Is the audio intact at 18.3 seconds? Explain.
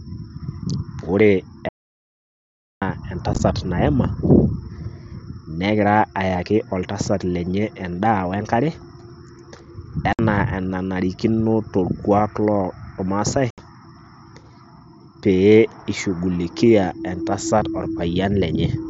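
Yes, at 18.3 seconds the speech is intact, with no fault at that moment.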